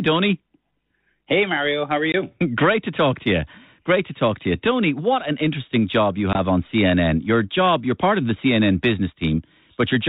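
At 2.12 s and 6.33 s, packet loss on the ADPCM call drops about 20 ms (a couple of packets), leaving a flat gap in the waveform and a blank spectrogram stripe. With predictor and step size desynchronised, speech resumes slightly distorted, settling within tens of milliseconds.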